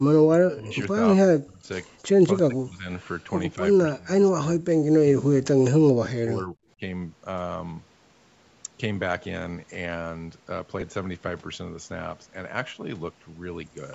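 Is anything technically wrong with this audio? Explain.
Yes, there are two kinds of fault in this speech clip.

Speech suppressed in double talk occurs at 0.0–0.81, 1.16–1.66, 2.27–2.89, 3.55–3.61, 3.87–4.83, 5.05–5.54 and 5.75–6.57 s. The drops reach about 40, 40, 30, 10, 30, 40 and 40 dB respectively. The likely cause is an echo canceller that could not tell this talker from loudspeaker echo during overlapping talk, so it attenuated both. On a waveform the envelope collapses in these stretches. On a spectrogram the speech energy thins or vanishes there, most deeply in the 40 dB stretches.

Lost LE Audio frames occur at 10.80–10.82 s, about 15 ms of missing audio, which fits two 7.5 ms LC3 frames. The decoder concealed the gap by repeating the last spectrum with randomised signs, so the voiced harmonics briefly turn into a short noisy smear instead of a clean break. On a spectrogram the harmonic lines blur into a narrow band of broadband texture. 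The waveform shows a brief stretch of noise-like samples in place of periodic cycles. The audio band tops out at 8 kHz from the call's microphone processing.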